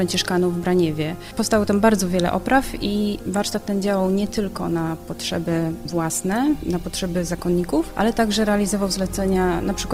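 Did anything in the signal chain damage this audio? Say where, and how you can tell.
Yes. At the network stage the stream fell back to an adaptive stream at a lower bitrate from 2.53 s to the end at 9.94 s. The quality abruptly drops with more codec artefacts, no gap, which fits a step from about 64 to 24 kbit/s.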